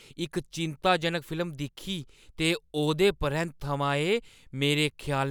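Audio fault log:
No faults heard in this speech recording.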